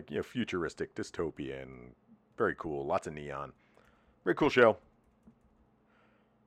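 A speech recording with no technical faults to report anywhere in the signal.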